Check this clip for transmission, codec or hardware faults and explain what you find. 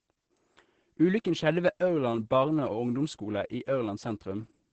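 The whole clip carries Opus voice compression. Throughout, the speech sounds muffled, hoarse and faintly robotic. That is what the SILK linear-prediction coder produces when its excitation is coded coarsely, and the heavy damage points to a low rate, about 10 kbps. On a spectrogram, energy stops abruptly near 8.7 kHz, leaving empty space above.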